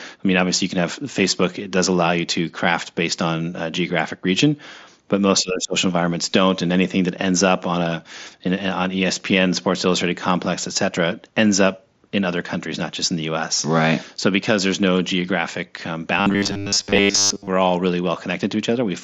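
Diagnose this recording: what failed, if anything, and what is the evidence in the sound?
Call processing is the stage at fault from 5.41 to 5.75 s, where the speech is suppressed in double talk: the level sinks by about 20 dB for roughly a third of a second. The likely cause is an echo canceller that, with both sides talking, could not separate this talker from loudspeaker echo and ducked everything. Unlike a network dropout, the sound dips and recovers.

From 16.18 to 17.48 s the speech becomes robotic from repeated short buffers, a rigid metallic buzz at 100 Hz that still tracks the syllables loosely. That repeat rate fits a 10 ms buffer being replayed, likely in the driver or buffer stage, with most of the real audio in that stretch skipped. Packet loss concealment on the network would smear or stretch the sound instead of locking it to one fixed pitch. The mSBC headset link's band limit near 8 kHz holds through both events.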